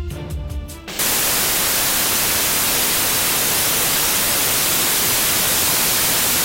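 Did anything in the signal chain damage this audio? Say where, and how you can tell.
Yes. Samples built from the wrong bytes, from 0.99 s to the end of the clip at about 6.44 s: the damage sits at the sample-format conversion stage. At 0.99 s the sound abruptly turns into loud, harsh broadband noise that persists to the end. The reader is misassembling each sample's bytes, through an offset, a swapped order or a wrong alignment, so the rapidly varying low-order bits land in the most significant position and dominate every value.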